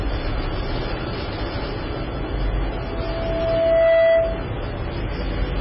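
Throughout, the audio is band-limited with nothing above 5.5 kHz, and it has a watery, swirling texture and smeared attacks. This is likely MP3 compression at a very low bitrate, around 16 kbps. A spectrogram shows a hard ceiling and speckled, flickering patches where weak components drop in and out.

From 2.70 to 4.53 s, a loudspeaker feedback squeal appears: a microphone re-captures its own loudspeaker output, and the loop runs away at 661 Hz. The pure tone swells over roughly a second to about 10 dB above the sound. On a spectrogram it appears as a single bright horizontal line, and the waveform envelope grows steadily.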